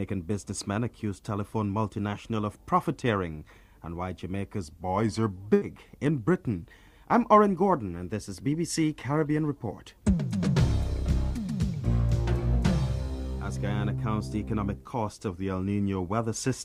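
From 4.61 to 5.36 s the sound abruptly slows and sags about a semitone flat, playing roughly 5.6% slow, then snaps back to its proper speed and pitch. This is likely a drift correction step, where software reconciling two clocks briefly changed the playback rate in one jump to rebalance its buffer, so speed and pitch moved together.

Just after, at 5.54 to 5.64 s, there is a burst of packet loss. The sound stalls into a continued, fading copy of what came before for about 80 ms. Then playback resumes further along, with about 80 ms of material skipped. The receiver had nothing to play for that stretch, so it extended the last audio while lowering its level, then jumped ahead.

The same step likely returns from 15.28 to 16.13 s with the identical slowdown and drop of almost exactly one semitone, then a snap back to normal pitch.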